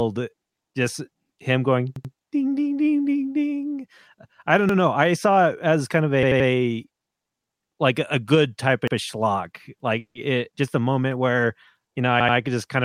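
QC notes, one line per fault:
1.96–2.13 s, 4.69–4.78 s, 6.23–6.49 s, 8.88–8.96 s, 12.20–12.37 s, repeated buffer: a piece of speech about 85 ms long is played again with a hard join each time. It repeats twice, once, three times, once and twice respectively, which gives a quick stutter. The 85 ms length fits a 4096-sample buffer. Nothing is skipped, so what follows arrives later. On a waveform the same 85 ms shape appears side by side, and a spectrogram shows identical blocks with a vertical seam at each join.
9.99–10.17 s, call audio freeze: the last sound is held as a fading buzzy smear, then drops to about 90 ms of silence before the speech resumes exactly where it stopped. About 160 ms of filler is inserted and nothing is lost, so everything afterwards is delayed by that amount. The likely cause is packets held up in transit that left the jitter buffer empty. A spectrogram shows a frozen, decaying band and then a blank gap.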